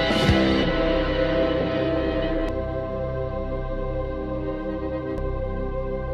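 Short chirps or blips break into the sound at 0.63, 2.49 and 5.18 s, caused by damaged data in the compressed stream making the decoder lose sync.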